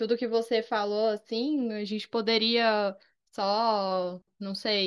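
Listening closely to the speech, nothing stood out as a technical fault at any point.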